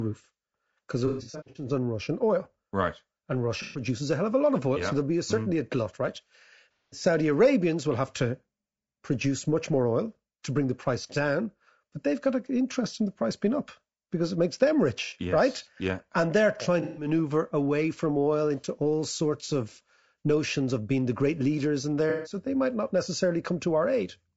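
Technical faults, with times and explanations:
throughout: low-delay AAC compression. Speech is rough and grainy, with noise between harmonics and a thin top band, likely from AAC-ELD's short frames at roughly 32 kbps.
1.07–1.66, 3.62–3.82, 6.78–7.03, 15.05–15.13, 16.82–17.08, 19.46–19.50, 22.10–22.36 s: AAC frame loss with concealment. Missing audio is rebuilt from the last good spectrum, giving smeared, noisy patches. The first stretch scatters gaps of up to about 100 ms.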